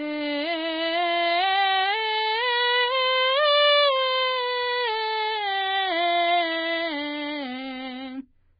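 From start to finish the music is band-limited and grainy, with nothing above about 4.9 kHz. The treble that survives has a hissy, noise-like texture, tones sound roughened and attacks are smeared, which is heavy damage consistent with Vorbis compression at a very low bitrate, likely somewhere near 14 kbps. The encoder has discarded the top of the spectrum and coarsely quantised what remains. On a spectrogram this shows as a hard horizontal ceiling at 4.9 kHz, with speckled, noisy energy just below it.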